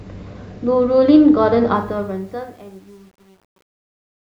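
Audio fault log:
1.76–4.39 s, truncation distortion on a fade: as the speech fades out, a gain stage is dropping the low bits without dither, and the grit sounds like a word length of about 9 bits. As the level sinks toward the smallest step, the waveform collapses into a few coarse square steps. It gets really rough from 2.27 s to the end, where the tail turns gritty instead of trailing off cleanly.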